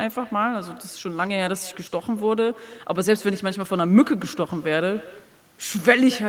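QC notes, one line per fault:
Throughout: echo with no canceller, each phrase returns about a fifth of a second later, about 20 dB quieter and thin, as far-end loudspeaker pickup loops back uncancelled.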